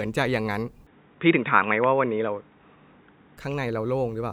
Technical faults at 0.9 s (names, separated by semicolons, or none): input switched to a poorer device